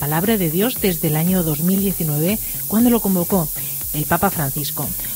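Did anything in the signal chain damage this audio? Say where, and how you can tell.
Yes, the sample-format conversion did it: the audio has been requantised to low bit depth with noise shaping, just 4 bits. Throughout the clip there's a steady, thin hiss roughly as loud as the sound itself, climbing steeply toward the top, because the rounding error gets pushed up in frequency.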